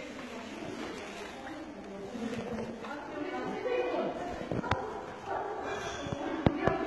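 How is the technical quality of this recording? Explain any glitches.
The recording is heavily compromised by codec damage. HE-AAC compression, throughout: the treble is rebuilt from copied lower bands rather than coded, likely at a very low bitrate around 16 kbps, so the highs sound gritty and metallic.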